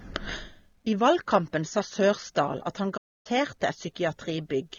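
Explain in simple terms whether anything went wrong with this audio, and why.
AAC compression, throughout the speech: the sound is dull, smeared and fizzy, likely because a lossy codec discarded detail to save space.

Playback stall, from 2.97 to 3.27 s, right after "at han": the audio goes silent for about 0.28 s, then picks up again, likely as the player ran out of data.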